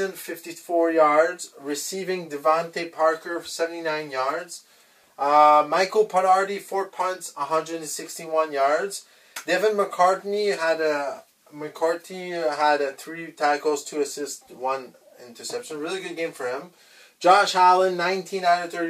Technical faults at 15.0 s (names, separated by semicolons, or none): none